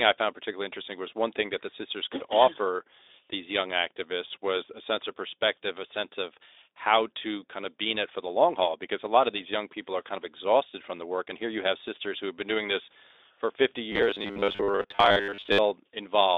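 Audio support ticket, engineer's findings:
Robotic sound from repeated short buffers, 13.92–15.58 s. Rigid metallic buzz at 100 Hz. Likely a 10 ms block replayed while most real speech is skipped. Speex path band-limited, 300 Hz–3.7 kHz, light coding damage.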